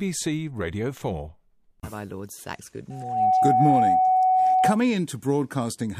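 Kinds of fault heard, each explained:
Loudspeaker feedback squeal: the microphone picks up its own loudspeaker until one frequency runs away. Here a steady 746 Hz tone swells within about a third of a second, from 2.90 to 4.79 s, to about 10 dB over the speech, unlike hum, which stays constant.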